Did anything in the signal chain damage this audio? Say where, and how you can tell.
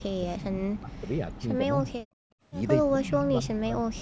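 Yes. The speech dips hard and breaks up from 0.03 to 2.07 s, and again from 2.88 to 3.97 s. This is likely speech suppressed in double talk by the call's echo canceller.

At 2.35 to 2.42 s the background drops about 29 dB for 70 ms. This is background gated by the echo canceller, which clamped the microphone during playback.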